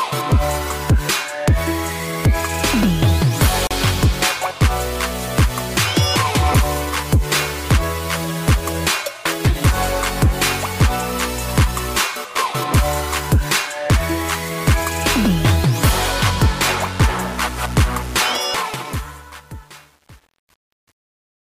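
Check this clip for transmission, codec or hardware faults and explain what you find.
Two faults stand out: a brief dropout early on and a gritty tail at the end.

At 3.67 to 3.71 s the sound cuts to 36 ms of silence, then resumes. This is likely a Bluetooth stall, where interference delayed packets long enough for the headphone buffer to run dry. It reads as a clean gap, unlike a codec glitch that leaves garbled sound.

From 18.32 s to the end, the fade-out shows truncation distortion on a fade. The gain stage keeps too few bits without dither, which fits an 8-bit stage, so the waveform collapses into coarse steps. From about 18.78 s onward the tail turns gritty. Ordinary low-level noise stays steady, but this roughness tracks the falling level.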